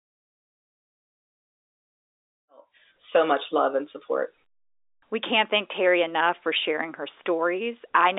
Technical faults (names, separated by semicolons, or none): none